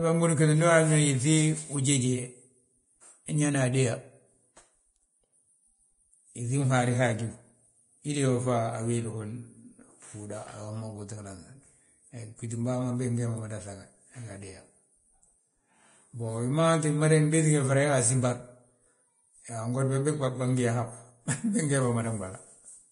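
A speech recording whose entire length carries heavy Vorbis compression damage: the treble has a hissy, grainy texture, consonant onsets sound smeared, and voiced tones have a roughened edge. This is likely from low-quality Vorbis encoding, where upper-band detail is quantised so coarsely it turns into noise of similar energy; the degree of damage points to a bitrate of around 30 kbps. A spectrogram would show nothing above 10.6 kHz, with a mottled, speckled band just beneath that cut-off.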